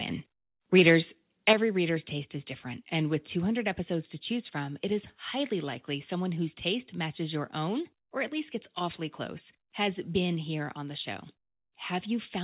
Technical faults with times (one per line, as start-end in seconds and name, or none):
1.48-1.53 microphone overload
1.53 microphone volume stepped down
10.35 microphone volume stepped down